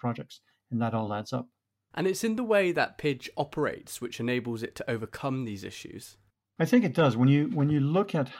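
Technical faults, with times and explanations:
No technical faults can be heard anywhere in the recording; the signal stays intact and steady across the whole clip.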